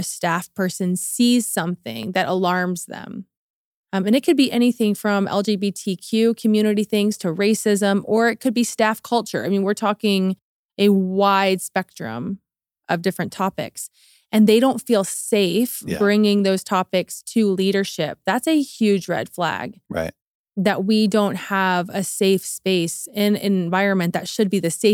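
A repeated buffer at 2.03 s: audio arrived late, so the device played a block fitting a 10 ms buffer twice, heard as a click or brief buzz.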